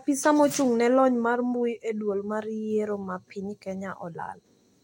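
Nothing in the speech points to a technical fault at any moment.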